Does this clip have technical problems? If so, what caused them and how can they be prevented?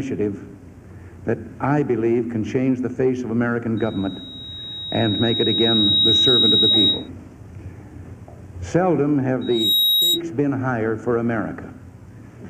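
Yes. The microphone picks up the loudspeaker it feeds, and at 3.8 kHz the loop gain exceeds one, causing loudspeaker feedback squeal. A tone swells over roughly two seconds from 3.77 to 7.09 s, then rises almost instantly from 9.41 to 10.21 s, reaching about 5 dB above the sound. Lowering gain, moving the microphone away from the loudspeaker, or notching 3.8 kHz would prevent it.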